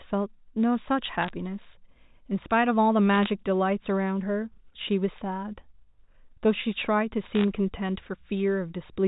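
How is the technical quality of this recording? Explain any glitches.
The speech has three short bursts of crackle. Under them, the audio has the narrow telephone sound of G.711 coding, with nothing above 4 kHz.

The crackle comes from bit errors on a digital phone line, at 1.23 to 1.30 s, 3.14 to 3.30 s and 7.35 to 7.44 s. Each flipped bit corrupts one sample. A hit on the sign bit or a high bit makes that sample jump, which gives a sharp tick. At error rates of around half a percent, a little lower in the middle burst, the ticks merge into crackle over unchanged speech.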